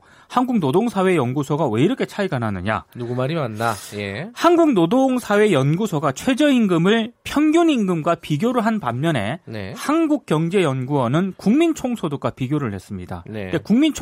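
No technical faults are audible anywhere in the speech recording.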